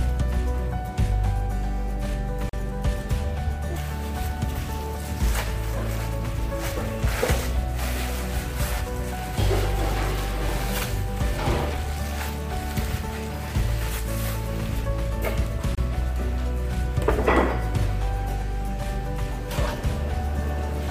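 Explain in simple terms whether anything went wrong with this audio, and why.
Two brief dropouts cut the sound to silence, at 2.49 to 2.53 seconds (about 40 ms) and at 15.75 to 15.78 seconds (about 26 ms). Each is likely a Bluetooth stall: wireless interference delayed the data, the headphones briefly ran out of audio, and playback resumed once it arrived.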